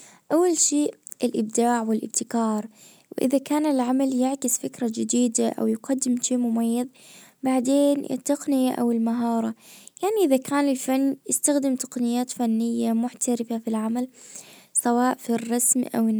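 Nothing in the speech stood out as a technical problem on listening.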